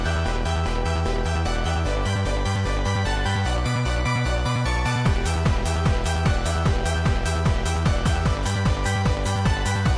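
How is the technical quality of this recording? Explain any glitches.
No audible glitches or faults.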